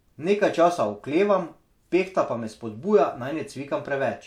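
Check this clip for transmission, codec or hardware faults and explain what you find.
No faults can be heard anywhere in this speech recording. Nothing in it points to a problem along the signal chain.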